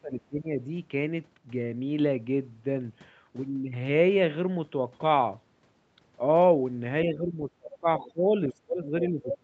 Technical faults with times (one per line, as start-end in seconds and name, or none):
0.01-0.68 speech suppressed in double talk
7.05-9.43 speech suppressed in double talk
7.72-7.78 other side's voice leaking through
8.84-9.38 other side's voice leaking through